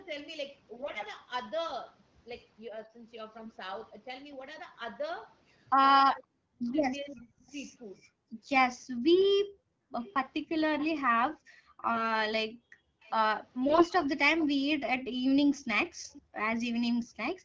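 Speech, with four kinds of fault. AMR bit errors hit at 0.74–1.05 s, 3.38–3.55 s, 11.92–12.08 s and 13.68–13.84 s. In these stretches the voice keeps its pitch and level but turns hoarse and gargly, because flipped bits in the weakly protected part of each frame misplace the excitation pulses and corrupt the fine gain and spectral values. Error rates run from roughly 5 to 10 percent, and the first burst's length fits about fifteen 20 ms frames. On a spectrogram the harmonics smear into grainy noise over the full band, while the waveform envelope stays roughly intact.

Speech suppressed in double talk appears at 2.7–2.95 s, a dip of about 10 dB lasting roughly a tenth of a second, and again at 6.44–8.0 s, where the talker is pulled down as much as about 40 dB for around half a second in total. This is likely an echo canceller that could not separate near speech from far-end echo and attenuated both. 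The waveform shows notches carved out of active speech, and the spectrogram shows sudden vertical gaps.

Echo leak adds a faint copy of the voice trailing by 520 ms at 7.14–7.51 s, about 30 dB below the speech, and louder, about 20 dB down, at 9.99–10.89 s and 13.01–16.22 s. The likely source is loudspeaker pickup that the far-end canceller left uncleared. On a spectrogram it appears as ghost traces of earlier syllables shifted half a second later.

Background gated by the echo canceller drops the room sound by as much as about 40 dB at 8.0–9.93 s, 11.24–13.01 s and from 14.8 s to the end. The canceller clamps the microphone while the loudspeaker plays, and the background returns when it releases. On the spectrogram the noise floor falls to near-black patches, and in the waveform the low-level floor flattens to almost nothing.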